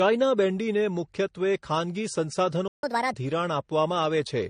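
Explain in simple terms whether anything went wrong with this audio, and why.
Throughout the speech, the sound is dull and swirly. That mix of smeared, watery detail points to transcoding between lossy codecs, likely AAC then MP3, rather than one compression pass.

From 2.68 to 2.83 s the audio drops out for about 150 ms, a playback stall that the player likely caused by running out of data. It is a clean, brief silence, not a crackle or a repeated fragment.

Right after, from 2.83 to 3.14 s, there is catch-up at higher speed: the speech runs 1.5 times faster and sounds about seven semitones higher, like a chipmunk, before returning to normal.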